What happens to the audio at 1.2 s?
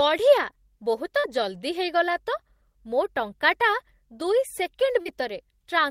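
About 40 ms of audio missed the decoder at 1.19 to 1.26 s, a short concealed packet loss. Extending the last sound leaves a brief smear just before "ଜଲ୍ଦି ହେଇଗଲା ତ ମୋ".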